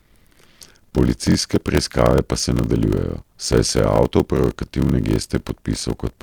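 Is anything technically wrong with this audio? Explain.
Yes. Throughout the speech there is a block size mismatch (padded). Short written blocks, which fits 1024 samples, are zero-filled to longer reads, producing a 41.7 Hz buzz and 0.889× speed with the timbre unchanged.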